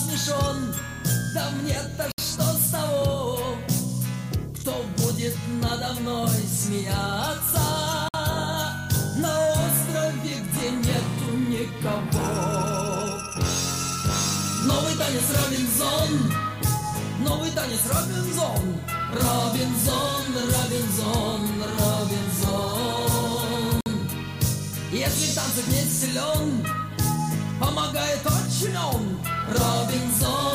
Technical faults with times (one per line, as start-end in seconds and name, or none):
2.12-2.18 Bluetooth stall
8.08-8.14 Bluetooth stall
23.81-23.86 Bluetooth stall